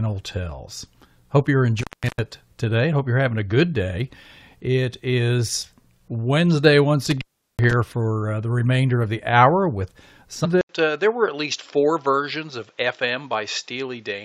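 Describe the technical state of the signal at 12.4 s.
At 12.4 s the recording is in the portion affected by an input switched to a poorer device, running from 10.61 s to the end. A gap of 80 ms marks the change, after which nothing is present above 7.5 kHz, the level drops by roughly 5 dB, and a faint new noise floor sits well below the signal. The dull, narrower sound is likely the system moving its capture to a lesser microphone or headset profile.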